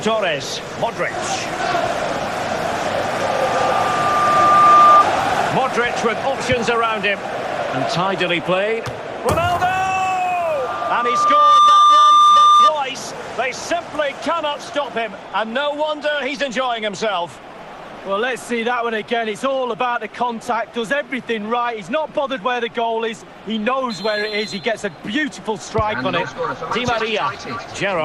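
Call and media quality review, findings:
Loudspeaker feedback squeal at 3.04–5.05 s and 10.42–12.72 s. Mic is picking up its own loudspeaker, with loop gain above unity at 1.2 kHz. A single tone swells over a second or so to roughly 10 dB above the audio, then cuts off.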